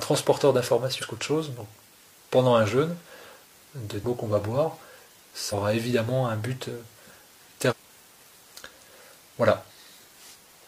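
At 0.98, 4.00, 5.48 and 7.67 s the audio is hit by damaged data in a compressed stream. Each hit lasts about 50 to 70 ms and sounds like a brief chirp, squawk, click or short hole. Corrupted bytes make the decoder misread those frames and lose sync until it finds a valid header again. On a spectrogram each shows as a narrow vertical disturbance, either garbled energy or a gap. The waveform shows a short, abrupt break in the surrounding envelope.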